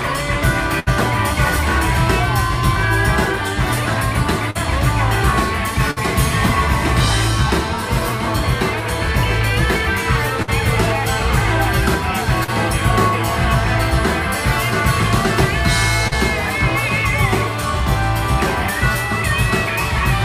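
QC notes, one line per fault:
0.79–0.89 s, 5.91–5.98 s, 10.42–10.50 s: burst of packet loss. About 60 ms of audio fails to arrive each time. The receiver extends the last sound for 52–71 ms while fading it, giving a held buzz or dying hiss, then resumes with that stretch gone.
4.51–4.57 s, 12.44–12.50 s, 16.08–16.13 s: short concealed packet loss. Roughly 40 ms goes missing in each. The receiver bridges it with 37–44 ms synthesised from the preceding sound and cross-fades back, so each heals into a brief smear or wobble.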